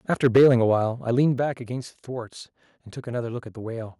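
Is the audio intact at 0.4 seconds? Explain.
No, not quite. At 0.4 s you're inside a stretch of microphone overload running from 0.24 to 0.56 s. The loudest peaks there go roughly 5 dB past the converter's limit, so their tops get sheared flat, and something like 7 percent of the samples end up clipped. That gives the speech a harsh, crackly edge. The likely cause is that the mic input was set too hot, driving the converter into its ceiling.

Right before your moment, at 0.37 s, there's also a microphone volume step-down. The level of both the speech and the background drops abruptly by about 4 dB in one jump, landing in the middle of that distorted stretch. This is most likely the call software reacting to the overload by pulling the device's input gain down a notch, which you hear as a sudden sag rather than a smooth fade.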